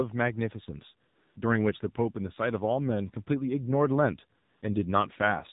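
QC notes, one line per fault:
throughout: AMR narrowband mobile codec, nothing above 4 kHz, and the low bitrate, which fits about 7.4 kbps, leaves the speech plainly buzzy and synthetic-sounding.
1.08–1.36 s and 4.40–4.62 s: AMR comfort noise. Speech frames stop for 280 ms and 220 ms, and smooth synthetic noise switches in to replace the real background.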